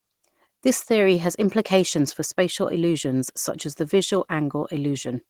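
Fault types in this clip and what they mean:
Opus compression: The speech was likely squeezed through Opus at a low rate, around 16 kbps, in its hybrid speech mode, leaving the voice plainly hoarse and muffled throughout, though the band still reaches about 23.3 kHz.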